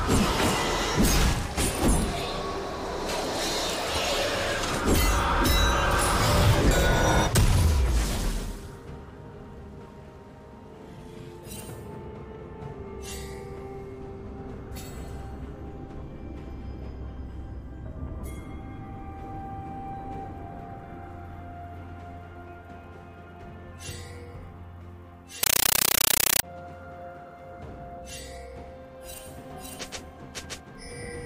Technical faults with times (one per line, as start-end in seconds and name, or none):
25.43-26.43 compressed stream played as audio